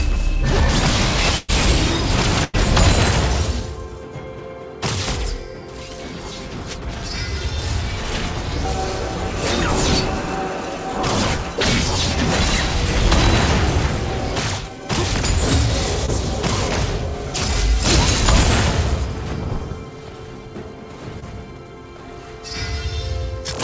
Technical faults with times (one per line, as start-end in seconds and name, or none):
1.37-1.50 burst of packet loss
2.44-2.55 burst of packet loss
16.06-16.10 short concealed packet loss
21.20-21.24 short concealed packet loss